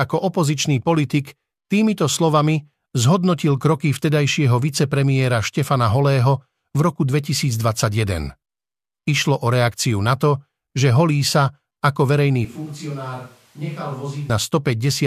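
From 12.45 to 14.3 s the speech turns abruptly hollow, thin and roomy, about 10 dB quieter with more background noise: likely a switch to a distant microphone.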